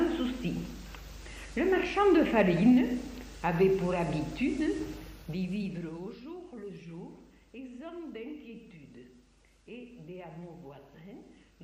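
A level drop was applied in coarse 2 dB steps at about ten per second with no smoothing, so from 4.95 to 6.35 s the sound falls by roughly 20 dB with an audible zipper noise of small clicks ticking over it.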